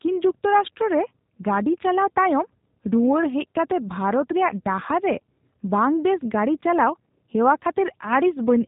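G.729 codec damage runs through the whole speech clip: nothing passes above about 3.8 kHz, and the voice sounds rough and slightly synthetic, rebuilt from a vocal-tract filter, pitch predictor and sparse pulses, which fits an 8 kbit/s G.729A stream.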